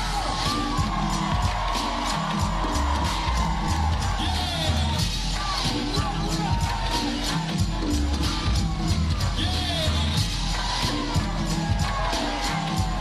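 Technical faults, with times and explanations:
Nothing stood out as a technical problem on listening to this audio.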